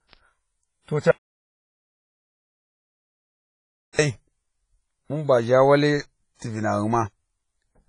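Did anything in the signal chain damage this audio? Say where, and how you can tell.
Yes. At the codec stage the whole clip has a ringing, washy character, with hiss that swells and fades with the speech and nothing above 10.4 kHz. That heavy smearing points to a low bitrate, around 24 kbps, and likely WMA compression zeroing weak detail.

There's also an audio dropout to silence from 1.11 s to 3.99 s, nearly 2.9 s of dead silence with no room tone at all. That likely means the input feed was lost while the recorder kept writing, so that stretch of speech is simply gone.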